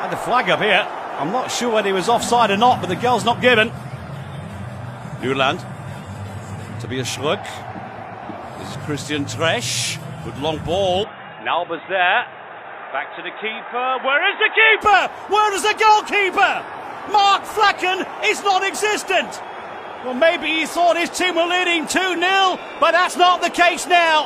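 From 11.04 s to 14.81 s the sound turns dull and boxy. A faint new background noise sits well below the signal. The level holds steady and there is no gap. The likely cause is an input switched to a poorer device.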